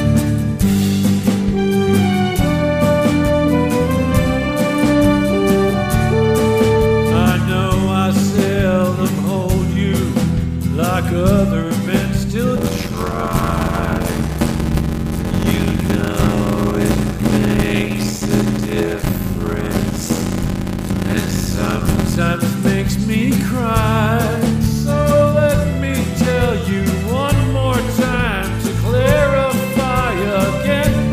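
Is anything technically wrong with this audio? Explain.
Yes. From 12.56 to 22.17 s, a block size mismatch (padded): short blocks are zero-filled to fit a larger read, likely 512 samples, causing an 86.1 Hz buzz and 0.625x playback speed.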